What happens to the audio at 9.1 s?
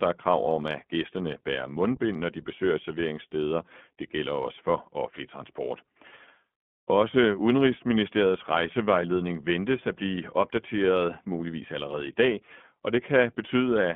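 At 9.1 s the speech is still running through an iLBC codec, as it is for the whole clip. Each short frame, consistent with 20 ms, is coded independently at a low rate, consistent with 15.2 kbps. Only 150 Hz to 3.4 kHz survives, so the speech sounds thin, boxy and audibly rough and synthetic.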